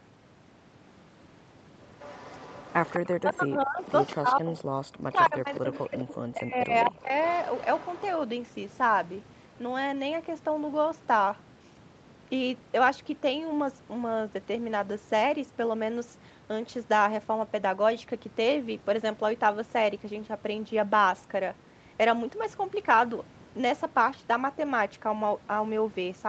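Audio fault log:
2.0–3.08 s, 3.84–4.63 s, 5.55–6.15 s and 6.86–8.03 s: echo leak. One side's echo canceller likely failed to remove all of its loudspeaker pickup. A faint copy of the voice returns 210 ms late, about 15 to 25 dB below the speech, as a trailing shadow.
3.18–4.55 s and 5.1–7.15 s: speech suppressed in double talk. With both sides talking at once, the echo canceller likely could not separate the local talker from the returning echo and turned both down. The voice dips by up to about 40 dB, for about one second in the first stretch and one and a half in the second.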